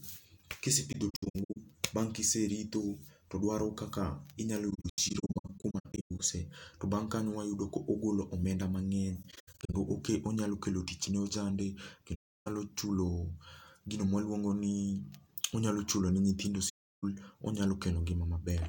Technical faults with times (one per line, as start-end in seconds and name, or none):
0.92-1.57 AAC frame loss with muting
4.70-6.20 AAC frame loss with muting
9.22-9.74 AAC frame loss with muting
12.14-12.47 AAC frame loss with muting
16.69-17.04 AAC frame loss with muting